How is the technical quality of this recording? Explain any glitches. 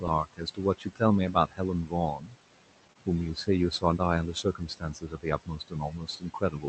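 The recording has three audible problems from the call's processing: constant noise-suppressor artifacts, repeated clipping of the speech by that suppressor, and one brief packet-loss glitch.

Noise suppressor artifacts run through the whole clip. The suppressor pushes down bands it judges to be steady noise, by about 18 dB, frame by frame. The room noise, about 15 dB below the speech, dips between phrases and swells beneath them.

Speech cut by the noise suppressor happens at 0.25 to 0.6 s, 0.78 to 1.01 s, 1.33 to 1.6 s, 2.16 to 2.35 s, and from 4.34 s to the end. The suppressor mistakes quiet parts of the speech for noise and turns them down, by roughly 11 to 18 dB. Soft consonants and endings sound swallowed, with roughly 150 to 200 ms affected in each of the early stretches.

Short concealed packet loss occurs at 2.93 to 2.97 s. About 20 ms of audio arrived too late to decode, so the receiver filled the gap by extending the preceding sound before blending back in. 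It comes across as a tiny smear or wobble in the speech.

The speech also tops out around 8 kHz, which fits the bandwidth of the call codec.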